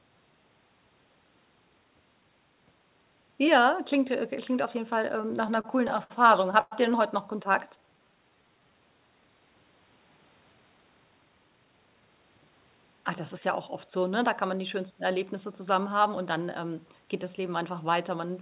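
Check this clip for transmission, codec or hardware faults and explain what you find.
Three transmission faults are audible, all between 5.2 and 8.7 s, in narrowband speech whose cut-off at 4 kHz fits G.711 A-law at 64 kbps.

Repeated stalls (stutter), 5.22 to 6.12 s: packets kept arriving late and the jitter buffer ran dry nine times, each gap bridged by continuing the last sound, the longest 62 ms, 157 ms in all (about 17% of the span). The speech drags and hiccups. A spectrogram shows short smeared, repeated stretches.

Call audio freeze, 6.61 to 6.73 s: the speech stops for about 104 ms, held as a fading buzz that ends in roughly 10 ms of silence, then resumes where it left off. This was likely caused by delayed packets emptying the jitter buffer. A waveform shows a decaying tail and a brief flat line.

Jitter buffer slow-down, 7.48 to 8.71 s: to rebuild its reserve, the receiver repeated single pitch periods, adding 154 ms and running at about 88% speed with pitch unchanged. 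Sounds are drawn out. A spectrogram shows stretched harmonics at constant spacing.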